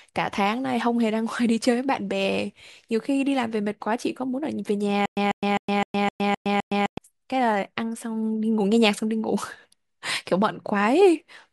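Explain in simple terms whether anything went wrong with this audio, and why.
Between 5.06 and 6.98 s there's a stutter with silent gaps: one 145 ms fragment loops seven times with silence between, likely a stalled stream.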